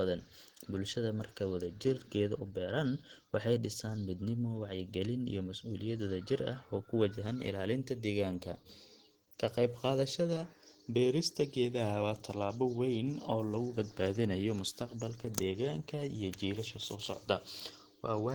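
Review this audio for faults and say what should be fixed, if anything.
The speech sounds hoarse, grainy and muffled from start to finish, with rough noise standing in for fine detail, even though the top end still reaches about 20 kHz. That's likely Opus compression in its hybrid speech mode, which fits a low bitrate around 16 kbps. Encoding at a higher bitrate, or going back to the uncompressed source, would fix it.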